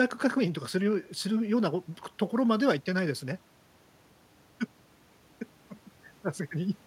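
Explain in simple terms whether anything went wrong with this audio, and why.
Nothing went wrong here.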